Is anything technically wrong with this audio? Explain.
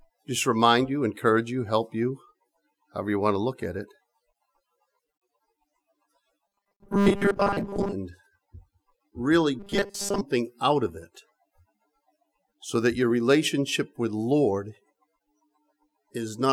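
Yes. From 6.47 to 7.93 s and 9.59 to 10.21 s, robotic sound from repeated short buffers: a rigid 200 Hz metallic buzz, likely from 5 ms chunks replayed over most of the skipped audio.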